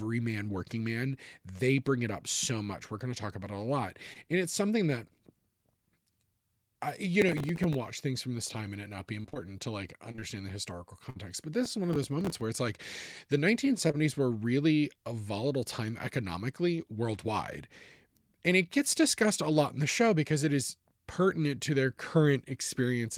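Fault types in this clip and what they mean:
Short concealed packet loss: About 20 ms of the call at a time failed to arrive, and the receiver bridged each hole by extending the preceding sound before blending back. Here it gives brief smears or wobbles at 4.13 s, in a run of three back-to-back at 10.11, 10.16 and 10.20 s, and as a pair at 13.87 and 13.91 s. Unlike the robotic stretch, each patch is short rather than chopping up a whole phrase.
Processor overload crackle: The processor kept missing its deadlines for tiny buffers, which fits buffers of roughly 3 ms, and each miss replayed a scrap of old audio with hard edges. Some twenty such misses make a gritty crackle riding on the speech from 7.22 to 7.75 s and again from 11.65 to 12.41 s. What separates it from packet loss is its texture: dense clicking layered over continuing sound, not smooth held or missing pieces.
Repeated packet loss (robotic sound): Between 9.21 and 9.37 s, four gaps arrived in quick succession, the longest 28 ms, so about half of that span is synthetic fill totalling roughly 80 ms. 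The speech turns choppy with pieces dropped out. It differs from short concealed loss because the patches crowd together, leaving no clean stretch for the decoder to recover in, and from crackle because it breaks the speech itself rather than adding grit on top.
Burst of packet loss: At 11.10 s about 60 ms went missing in one stretch, and the receiver stretched the last sound while fading it down, heard as a held buzz or fading hiss for that duration. The speech then resumes further along with that portion gone. Compared with a short concealed loss it is roughly three times longer and audibly decays, so the gap reads as a stall instead of a momentary smear.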